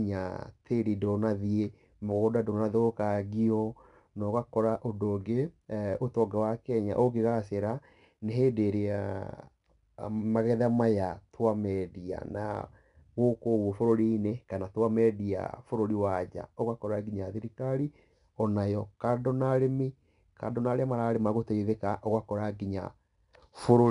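From start to finish the speech carries 4-bit ADPCM compression: coarse 4-bit steps add plainly audible level-following grit, and nothing above 10.6 kHz fits roughly 89 kbps.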